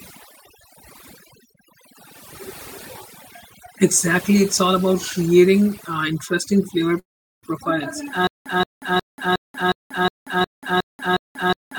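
Throughout the recording, overdone noise removal has been applied. A noise reduction stage set far too aggressively pulls individual frequency bands down or out whenever they sit near its noise estimate, and it takes the softer parts of the speech along with the hiss. The pauses fall to near silence dotted with twinkling specks.

At 6.99 s, right after "creating uh interesting flavor", there is a call audio freeze, likely caused by packets held up in transit so that the jitter buffer ran dry. The receiver briefly stretches the last sound, then falls quiet for about 400 ms, and speech resumes at 7.45 s exactly where it stopped. Roughly 434 ms of extra time has been inserted, and nothing appears to be lost.

From 8.27 s, just after "uh interesting flavor profiles", to the end of the clip, there is a stutter with silent gaps, likely caused by the player or stream stalling and replaying its last fragment on each retry before running empty. 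A 175 ms burst repeats nine times on a steady 362 ms cycle, with about 186 ms of digital silence between repeats. The speech that should have followed never plays.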